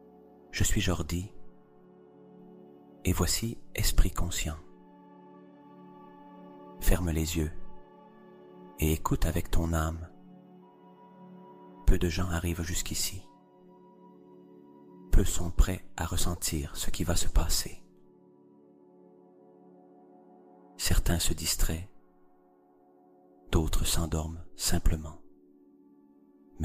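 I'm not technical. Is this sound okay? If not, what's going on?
No, not quite. There are two short glitches, both a fault called corrupt frame decoded. At about 10.1 s and again from 16.37 to 16.39 s, a tiny chirp or blip cuts in. The audio is stored in small compressed chunks, and a couple of chunks got scrambled each time, but the player played them anyway. That sends sound to the wrong pitches for a split second. The first blip is faint; the second is more noticeable.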